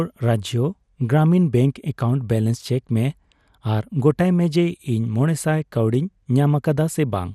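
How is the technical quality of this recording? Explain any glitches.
The recording has two audible technical problems: a constant low-rate coding character across the whole speech clip, and one brief burst of corruption.

Throughout, the speech sounds dull and granular, with a gurgling texture and upper frequencies that seem to switch in and out. This is likely MP2 compression at a low bitrate, and the damage is plainly audible, which points to something around 80 kbps. MPEG Layer II divides the signal into 32 sub-bands and allocates bits per band. When bits are scarce, the top bands get dropped and the remaining ones are quantised coarsely.

At 2.55 s there is a short DAB burbling event: a brief blip of noise laid over the speech. It happens when reception errors slip past error correction into the MP2 data stream. Corrupted samples then add short noise blips in individual sub-bands, and corrupted scale factors, where they get through, make sub-bands jump in level for the affected frames. 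The length fits a couple of damaged frames, and the sound points to a modest error rate rather than a deep signal fade.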